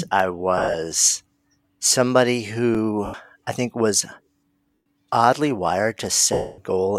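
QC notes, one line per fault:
0.58–0.74 s, lost LE Audio frames: about 130 ms of gaps scattered over 160 ms, longest run roughly 50 ms; the LC3 decoder repeats the last spectrum with random signs, giving brief noisy smears.
3.06–3.14 s, lost LE Audio frames: 80 ms missing, which fits eight dropped 10 ms frames; the concealment replays the previous spectrum with scrambled phase, so the sound turns into a short hiss-like smear.
4.75–4.85 s, lost LE Audio frames: 120 ms missing; the decoder fills the gap with the last spectrum under random signs, blurring the sound into noise before it resumes.
6.33–6.58 s, lost LE Audio frames: a 250 ms loss, long enough that the repeated, sign-randomised spectrum is faded out after the first few frames, so the smear dies away gradually towards silence.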